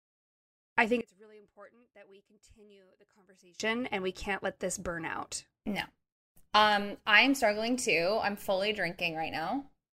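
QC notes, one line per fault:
1.01–3.60 s, one channel inverted: after "I think" the speech collapses by about 28 dB to a faint residue until "and we can't let", likely from one channel's polarity being flipped so the centred voice cancels in mono; unlike a dropout, a faint copy remains.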